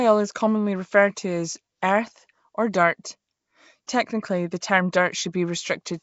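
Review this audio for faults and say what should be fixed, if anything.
The speech was likely coded with Nellymoser compression. Bands without enough bits are filled with noise, giving a rough, hissy, underwater sound with nothing above 7.7 kHz.

At 3.86 s there is pre-echo. Block quantisation noise spread ahead of a late-falling attack, adding a 19 ms hiss before it and softening the onset.

Keeping the recording in a modern codec with adaptive block switching at an adequate bitrate, or unencoded, prevents both the noise fill and the pre-echo.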